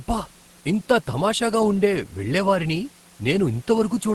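Nothing goes wrong in this speech clip, which just carries the expected sound of a call line topping out around 12 kHz, with a faint room hush sitting about 31 dB under the talking.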